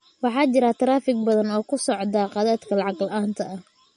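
Throughout, the speech carries plain MP3 compression damage, likely from a starved bitrate near 40 kbps. Treble stops at 10.6 kHz. Weak detail sounds watery and swirly.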